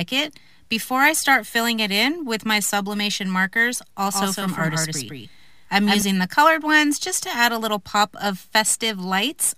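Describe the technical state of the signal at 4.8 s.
A doubled audio track runs from 4.12 s to 6.02 s, so it covers 4.8 s. The same full-band sound is heard twice, a second copy trailing the original by around 150 ms and sitting roughly 5 dB lower. It carries no decay or room colour, giving a hard, slapback-like repeat that starts and stops abruptly at the span edges. The cause is likely a second capture through a slower path, or two copies held out of step.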